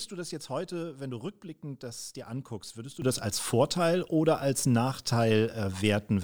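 At 3.02 s, speech and background noise jump together by about 12 dB. This sudden gain jump likely reflects an unramped gain change.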